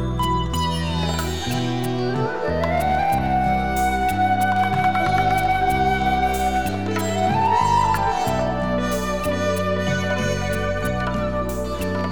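Nothing in the audio stood out as a technical problem on listening.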